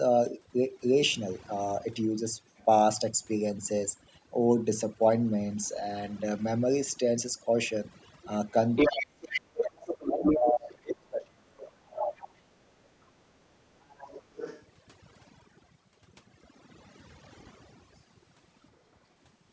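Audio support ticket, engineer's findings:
Overdone noise removal, whole clip: noise reduction set too aggressively, gating bands near its noise estimate along with quiet speech components. Background drops and breaks up into twinkling specks; band-limiting from call mic processing leaving nothing above 8 kHz.

Other side's voice leaking through: far-end audio from loudspeaker incompletely removed by echo canceller, likely residual echo. Level with speech at 8.76–9.4 s and 9.86–10.4 s; about 15 dB down at 13.82–14.65 s, about 20 dB at 12.17–12.28 s; faint scraps at 2.57–2.65 s and 10.7–10.75 s.

Speech suppressed in double talk: echo canceller unable to separate near-end speech from echo during overlap, likely attenuating both. Near-end speech dips roughly 30 dB across 8.88–12.22 s, about 3 s affected; dips about 35 dB at 12.39–12.91 s.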